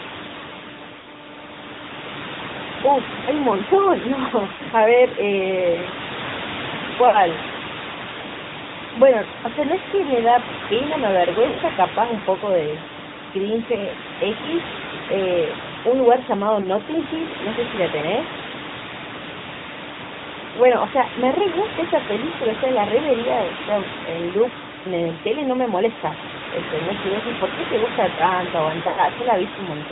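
AMR narrowband mobile codec throughout this speech clip: band-limited at 4 kHz with a buzzy, synthetic edge that fits a mid-range AMR-NB mode around 10.2 kbps. Lost AMR speech frames at 1.00–1.08, 4.54–4.62, 7.08–7.18, 11.48–11.60, 13.90–13.95, 16.62–16.67, 20.08–20.11 and 28.88–29.01 s: gaps of 20 to 100 ms where the decoder stretches the last good frame and fades it, so the sound dips, warbles or briefly trails off.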